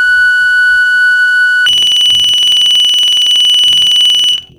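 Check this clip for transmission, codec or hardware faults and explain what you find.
One fault in this music clip. From 1.66 s to the end, planar audio is read as interleaved. Each 46 ms block, which fits a 2048-sample block, plays left then right at double speed, so it sounds an octave high with a 21.5 Hz flutter.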